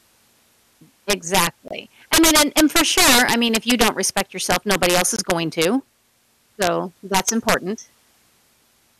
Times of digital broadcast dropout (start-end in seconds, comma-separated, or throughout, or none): 1.68-1.71, 5.16-5.19